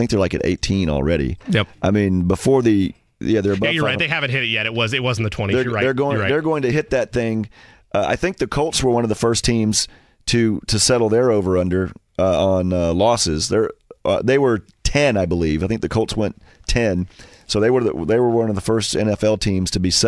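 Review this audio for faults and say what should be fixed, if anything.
No faults found here; nothing needs fixing.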